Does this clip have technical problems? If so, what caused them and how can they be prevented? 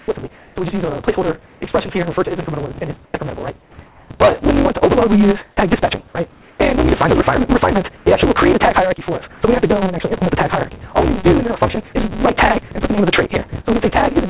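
Yes. A block size mismatch (truncated) runs throughout: a steady buzz at 188 Hz, and the audio plays 1.88 times too fast at about its normal pitch. One stage writes longer blocks than the next reads, which fits a 256-sample read, and each block's tail is discarded. Matching block sizes between stages prevents it.

Comfort noise in place of the background appears at 0.00 to 1.61 s, 3.05 to 4.10 s, 6.32 to 6.59 s and 7.97 to 9.41 s. The real background gives way to a flat, featureless hiss, about 3 dB quieter at 6.32 s. This is likely from discontinuous transmission, where the receiver synthesises noise during pauses. Disabling discontinuous transmission avoids it.

Onsets clipped by the voice detector occur at 0.06 to 0.08 s and 5.55 to 5.57 s. About 20 ms of each start is missing, so the sound begins abruptly. The detector was likely slow to trigger and sent nothing until it did. A faster detector attack or a look-ahead prevents this.

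Sound dropped by the voice detector at 12.68 to 12.71 s briefly replaces about 20 ms of sound with steady noise. The detector likely mistook quiet sound for background and stopped sending. A lower detection threshold or a longer hangover time prevents such dropouts.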